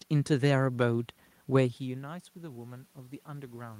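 From 1.82 s to the end there's automatic gain rising. The talker drifted away from the mic around a second and a half in, the input fell by about 17 dB, and the AGC slowly winds its gain back up, so voice and room noise swell together.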